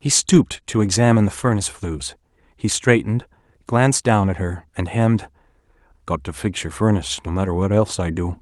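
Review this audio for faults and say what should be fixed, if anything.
Nothing here needs fixing, since no technical faults turn up anywhere in the recording.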